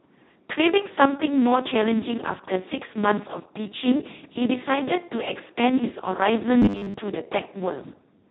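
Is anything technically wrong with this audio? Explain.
Yes, two faults can be heard in this speech.

Throughout the clip, the voice sounds hoarse, noisy and close to robotic. This is heavy Speex codec damage. Speex is a CELP speech codec that models the voice as a filter driven by an excitation signal. At this degree of coarseness, which points to a setting near its lowest, around 2 kbps, too few bits remain to describe that excitation. The result drifts toward a vocoder-like rasp.

From 6.62 to 6.94 s, the voice turns into a rigid, metallic buzz at 100 Hz that still loosely tracks the speech. This robotic sound from repeated short buffers likely comes from audio arriving too late. The software fills the gaps by looping the last 10 ms or so, skipping most of the real signal over that stretch. The loop imposes its own fixed pitch.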